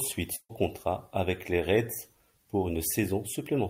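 Speech, with a burst of packet loss from 0.35 to 0.51 s: about 140 ms is concealed by a fading held sound, with a short silence, before "contrat avec les" resumes.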